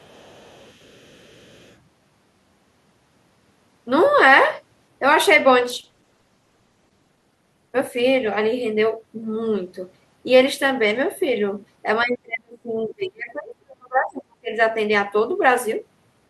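From 0.00 to 1.77 s, a second voice sits faintly underneath the main talker, well below it in level. This is the other side's voice leaking through. The talker's device plays the far end on a loudspeaker, and the microphone picks it up again. The echo canceller likely failed to strip all of it out. What remains is quiet and sits apart from the near voice, like a distant scrap of another call.

From 5.62 to 8.83 s comes a call bitrate drop. The speech turns coarse and watery, and the top end dulls. The sound fits a fall from around 64 kbps to about 13 kbps. For roughly 1.4 s at the worst point, the muffling and roughness peak. The network's bandwidth estimate fell, so the encoder got far fewer bits. It coded the voice more crudely and trimmed the highs until the rate came back.

From 12.03 to 14.59 s, the talker's voice sinks sharply, at times almost to nothing. This is speech suppressed in double talk. 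Both sides were most likely talking at once. The echo canceller could not tell the near talker from the loudspeaker echo, so it pulled everything down hard. The dips come and go across about three seconds. The near voice sounds gated, as if it is being switched off in pieces.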